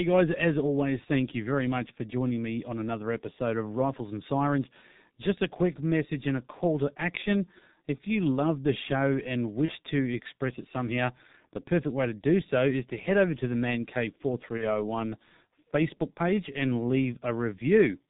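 G.723.1 codec coding runs throughout this speech clip, leaving it heavily muffled and hoarse with smeared consonants, since nothing passes above 4 kHz, which fits a roughly 6 kbit/s low-rate coder. VoIP packet loss concealed by the speech codec occurs at 9.66–9.72 s, between "love the show and" and "to express it somehow", and again at 14.57–14.71 s. Each time about 30 ms went missing and the decoder filled the gap by extending its last pitch and filter into a fading buzzy tone or coloured noise, and the voice stays weakened briefly afterwards.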